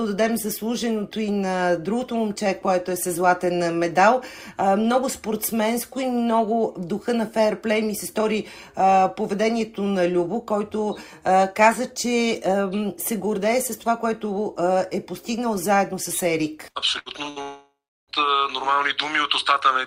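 Near the end, the audio stutters three times in quick succession: at 16.69 to 16.78 s, 16.99 to 17.09 s and 17.30 to 17.39 s the last sound is briefly held as a flat buzz or hiss that sinks in level, then the audio jumps ahead. Each is a burst of packet loss, where a short run of packets never arrived in time and the receiver extended and faded what it already had, skipping about 60 ms of audio. Straight after, from 17.42 to 18.12 s, the sound smears into a fading continuation that gives way to roughly a third of a second of silence before the audio returns further along, with about 0.66 s gone. This is likely a long network dropout, in which nothing arrived for that stretch and the receiver's concealment ran out.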